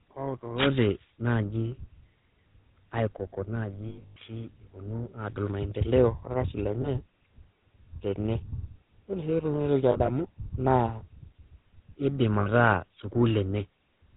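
Speech passed through the GSM full-rate codec, which fits a 13 kbps stream. It rebuilds the voice from a vocal-tract model driven by sparse regular pulses and cuts everything above 4 kHz, leaving a plainly audible buzzy, gravelly roughness and a dull top end. Lost GSM frames were concealed by repeating the last good frame, which produces brief rough, metallic rings at 3.88–4.17 s, 6.82–6.89 s, 9.92–10.1 s and 12.40–12.47 s. The first is the worst, with about 220 ms missing across 280 ms and a longest gap of roughly a tenth of a second. The others are shorter, at 20 ms, 80 ms spread over 160 ms, and 60 ms.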